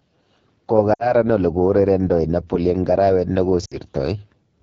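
AMR wideband (HD Voice) codec, throughout: the speech is coded at 8.85 kbit/s, one of the lowest AMR-WB rates. The pulse-driven vocal tract model has too few bits to track the voice cleanly, so the speech sounds rough and raspy, with shaped noise standing in for the top band between 6.4 and 7 kHz.

Lost AMR speech frames, at 0.93 to 1.14 s and again at 3.65 to 3.77 s: each time, about 60 ms of speech failed to arrive intact, which fits a run of three 20 ms frames. The decoder repeats the last good pitch and vocal tract settings at falling gain, so the sound smears and quickly fades before returning weak and rough for a moment.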